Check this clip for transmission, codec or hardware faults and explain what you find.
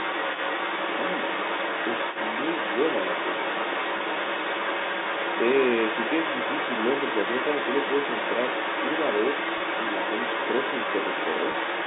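Two faults are present: a second voice leaking through for the whole clip, and three brief packet losses concealed by pitch repetition.

The other side's voice leaking through runs from start to finish, only a little quieter than the main speech. It is most likely the far end played on the talker's loudspeaker and picked up again by the microphone, with the echo canceller failing to remove it. On a spectrogram, a second set of harmonic stripes overlaps the main ones.

Packet loss with pitch repetition occurs at 3.98–4.00 s, 9.58–9.60 s and 11.52–11.54 s. Each time about 20 ms of audio went missing, and the receiver filled the gap by looping the last pitch period. The result is a short, slightly held buzz before the speech resumes. On a spectrogram, each gap shows frozen, perfectly regular harmonics. On the waveform, repeated, fading cycles fill about 20 ms. All of this sits inside the 200–3700 Hz telephone band.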